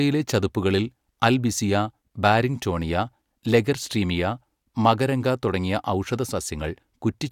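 Nothing in this recording jumps out as a technical fault, so there's really nothing to walk through here.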